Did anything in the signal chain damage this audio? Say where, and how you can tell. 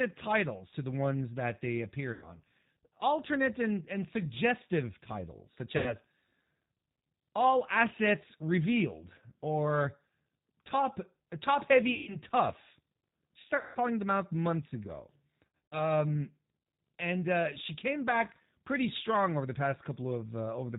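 Yes. At the codec stage, the whole clip has the rough, synthetic texture and hard 4 kHz ceiling of the G.729 codec, which fits an 8 kbit/s stream.

On the network side, there's VoIP packet loss concealed by the speech codec. Buzzy or noisy, fading smears appear at 2.13, 5.77, 11.95, 13.57 and 15.57 s (scattered), where the decoder extrapolated over 90 to 180 ms of missing audio.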